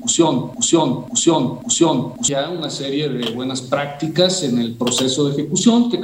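From the very first moment until about 2.28 s, a broken-record loop is already under way: a fragment of roughly 0.54 s plays, then plays again exactly, three times in a row, with no gap between copies. The likely cause is a stalled player or stream that kept resending the last chunk it held, so the audio belonging to that stretch never arrives. On a waveform and spectrogram, identical blocks tile side by side at a 0.54 s spacing.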